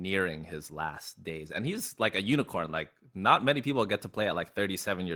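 At 1.47 to 1.49 s, between "his last days" and "and he's like a", the speech has a lost packet rebuilt from error correction. For about 20 ms, which fits a single lost packet, the decoder played the low-bitrate copy carried in the next packet, so the sound turns briefly rougher and noisier. Unlike a dropout there is no silence, and unlike guessed concealment it doesn't smear or buzz.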